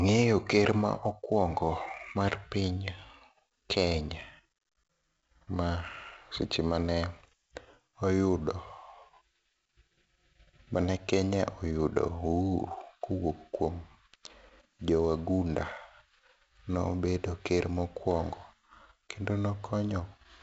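From start to finish the speech carries heavy 4-bit ADPCM compression damage. A gritty hiss rides on every loud syllable and sharp onsets crackle where the step size lags. Unlike perceptual codecs, there's no swirling or warbling. Nothing sounds above 7.7 kHz, which fits a 16 kHz rate at 64 kbps.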